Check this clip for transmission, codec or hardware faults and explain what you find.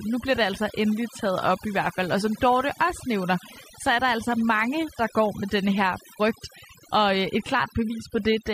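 Overdone noise removal runs through the whole speech clip, from start to finish. A noise reduction stage set far too aggressively is pulling individual frequency bands down or out whenever they sit close to its estimate of the background noise, and the quieter parts of the voice fall into that range and get removed too. The background drops and breaks up into twinkling, chirpy specks.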